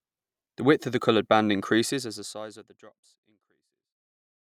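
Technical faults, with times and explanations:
No technical faults found; the smooth fade-out from around 2 s to the end is an ordinary edit, not a defect.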